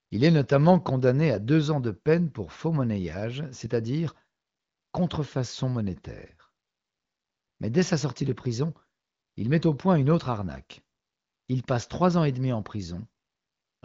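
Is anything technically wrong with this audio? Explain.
No, nothing stood out as technically wrong when listening to this speech clip.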